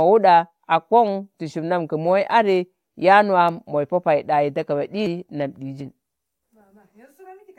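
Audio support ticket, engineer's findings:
Abrupt forward jumps at 5.06 s and 5.81 s, roughly a tenth and a twentieth of a second skipped. No silent gap, unlike a dropout. Likely a dropped buffer (overrun): capture not read in time, overwritten samples lost, edges spliced together.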